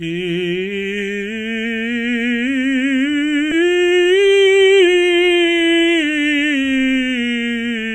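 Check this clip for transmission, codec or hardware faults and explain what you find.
Two transmission faults in this music, back to back.

At 3.51 to 3.53 s there's a skip ahead. Around 0.7 s of the music got dropped while later audio was already queued, so playback lurches forward with no gap or fill and the two sides butt straight together. You hear an abrupt jump in the musical line.

Right after, from 3.61 to 6.79 s, comes a jitter buffer speed-up. The receiver was holding more audio than it wanted, so it kept trimming tiny pitch-period-sized slivers, about 0.3 s in total. The music runs at 110% speed with unchanged pitch, feeling rushed and losing its steady tempo.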